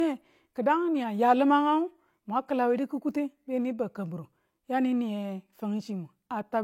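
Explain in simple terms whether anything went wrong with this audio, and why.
Throughout the speech, the highest sounds stop at 16.2 kHz and a smeared, compressed quality remains, likely low-bitrate audio saved at a high bitrate, which cannot restore lost detail.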